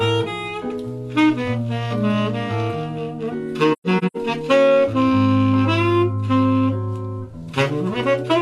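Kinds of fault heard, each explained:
AAC frame loss with muting: between 3.72 and 4.17 s the sound drops out in several separate holes totalling about 256 ms, spread over roughly 0.43 s, with the longest gap around 150 ms. The decoder zeroes the spectrum of each missing frame, and the overlapping windows fade the sound out and back in over about a frame at each edge, so the holes are soft-edged. Hard cuts would point to plain sample dropout, and repeated fragments would point to concealment.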